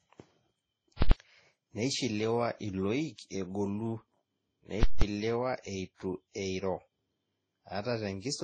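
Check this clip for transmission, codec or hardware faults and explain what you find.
Two kinds of fault are present in this speech clip.

Throughout, the speech has smeared, warbly coding artefacts layered on one another and nothing above 13.9 kHz, likely from transcoding between lossy codecs, MP3 then Vorbis, at low bitrates.

At 1.02 to 1.12 s and 4.83 to 5.02 s, a very loud pop opens and closes each gap with silence between. These are invalid numbers at full scale: bad calculations pinned the output to its limits for about 93 ms and 186 ms, fitting 4096- and 8192-sample blocks.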